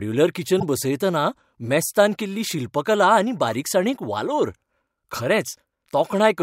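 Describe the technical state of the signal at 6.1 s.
At 6.1 s the speech signal is intact, with no audible fault at that moment.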